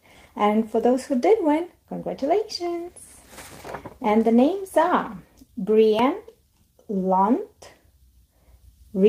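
Short concealed packet loss occurs from 0.91 to 0.95 s. About 20 ms of audio failed to reach the decoder in time, and the receiver patched roughly 16 ms of that gap by extending the preceding sound, carrying its pitch forward where it was tonal or filling with shaped noise where it was not, before blending back into the real signal. The result is a brief smear or wobble rather than a gap.

A dropped buffer (overrun) at 5.99 s is heard as a small jump forward in the sound. The likely cause is that the program did not read its samples before the hardware overwrote them. Around 15 ms of audio is missing, and the material on either side is butted directly together with no silence between. The sound resumes slightly further along than it should.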